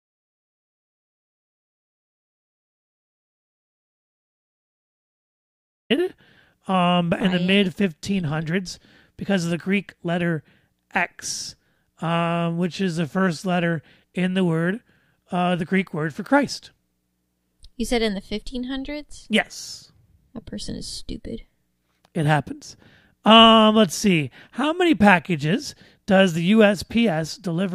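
Speech opens in an audio dropout to silence lasting until 5.90 s: flat-line waveform, empty spectrogram, no room tone, likely from lost input while recording continued.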